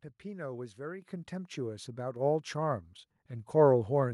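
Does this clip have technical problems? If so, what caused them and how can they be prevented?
Yes. The microphone volume is stepped up at 1.02 s (about 9 dB) and 2.16 s (about 5 dB), as call software judging the input too quiet raises its gain in one jump. Speech and background rise together, and the waveform widens and the spectrogram brightens across all frequencies. Turning off automatic microphone gain adjustment and setting a fixed, adequate input level prevents it.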